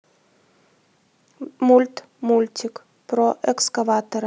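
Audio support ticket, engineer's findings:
No fault found on the speech clip. Nothing audible points to a component needing attention.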